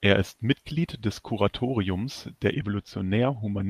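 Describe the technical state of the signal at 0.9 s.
At 0.9 s the speech signal is intact, with no technical fault audible at that moment.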